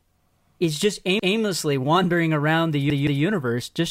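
A short speech clip with two repeated-buffer stutters. Between "is just" and "wandering around the", about 1.20 to 1.37 s, a 170 ms slice plays once more with a hard join. After "wandering around the", 2.90 to 3.24 s, the same length repeats twice. Fresh audio didn't reach the device in time, so it replayed its last buffer. The 170 ms length fits an 8192-sample buffer, and nothing seems to go missing.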